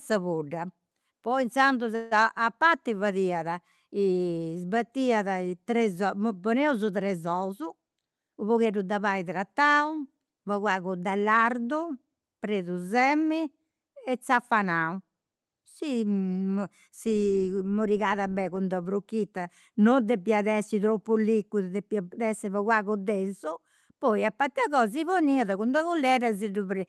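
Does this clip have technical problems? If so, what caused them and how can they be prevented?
Yes. From 1.95 to 2.13 s there's a call audio freeze: the sound smears into a fading buzz for about 0.16 s, likely because delayed packets let the jitter buffer run dry, and then it picks up where it left off. A steadier network path or a slightly deeper jitter buffer would prevent it.

From 7.48 to 8.73 s there's a jitter buffer speed-up: the backlog gets trimmed by snipping pitch-period chunks, roughly 150 ms in total, so the audio runs at about 113% speed with unchanged pitch and sounds hurried. Cutting the packet bunching at its network source would prevent it.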